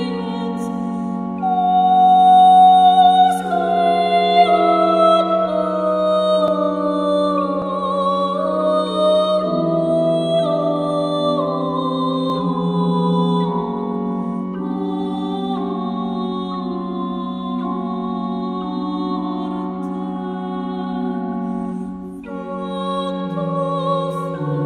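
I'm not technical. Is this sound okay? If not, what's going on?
No, not quite. There are three small skips, at 6.48, 7.62 and 12.3 seconds. Each one is a spot where the sound jumps forward a touch, as if a tiny slice, about a fiftieth of a second, went missing. That's most likely a dropped buffer (overrun): the recording software didn't pick up a chunk of sound in time, so it got overwritten and the pieces on either side were stitched straight together.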